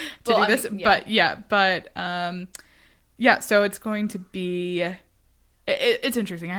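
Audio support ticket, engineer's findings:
No faults found: the speech signal is continuous and intact, carrying only the light coding texture expected from Opus voice compression in fullband hybrid mode, consistent with a bitrate of around 20 kbps.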